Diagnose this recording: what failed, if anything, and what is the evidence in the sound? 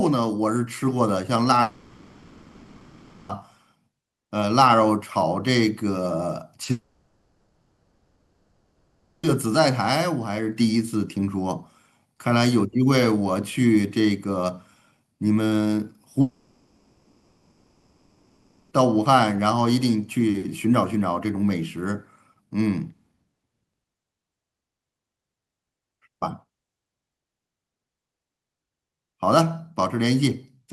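Network stage. Long network dropouts at 1.61–3.31 s, 6.71–9.25 s and 16.21–18.73 s. Each gap runs about 1.7 to 2.5 s. The last sound is stretched into a fading buzz or hiss, then audio resumes further on with that stretch gone. Likely cause: packets stopped arriving entirely.

Network stage, handled by the decoder. There is a short concealed packet loss at 6.63–6.67 s, just before the second dropout. About 20 ms of audio never arrived in time. The receiver extrapolated the preceding sound to fill it, leaving a brief smear or wobble.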